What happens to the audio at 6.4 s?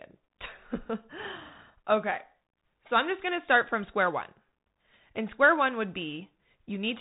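At 6.4 s the speech carries Bluetooth CVSD headset codec damage, present throughout. Nothing passes above 3.8 kHz. One-bit adaptive steps leave scratchy s sounds and granular hiss.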